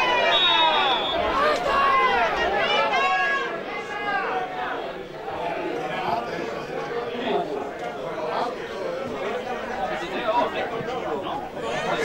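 From 3.07 s to 9.07 s the sound has a channel delay, heard as doubling. One channel runs about 46 ms behind the other. That offset fits a 2048-sample buffer. When the two channels are summed to mono, the late copy no longer blends in. It arrives as a separate image at the same level. Each onset sounds twice, like a tight slap echo. At 9.07 s the channels realign and the doubling stops.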